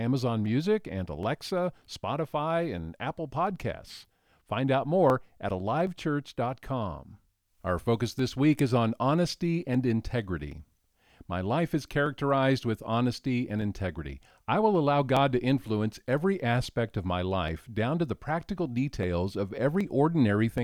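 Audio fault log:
0.46–20.58 s, clock drift buffer slips: a click or pop recurs about every 0.78 s across the speech, roughly thirty in all. The steady spacing is the clue. The likely cause is two devices running on separate clocks that disagree by around a thousandth. The buffer between them drifts until a block of a few dozen samples is dropped or repeated. Each jump breaks the waveform, so it clicks.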